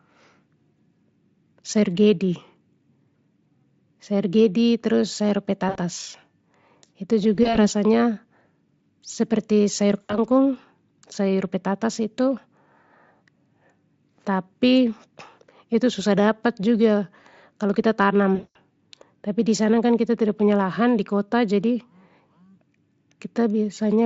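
Speech clip with VoIP packet loss concealed by the speech codec at 5.69–5.77 s, 7.35–7.61 s (scattered short dropouts), 10.01–10.18 s and 18.35–18.57 s, the longest. Each time, the decoder stretches the last sound into a fading buzzy tone or coloured noise.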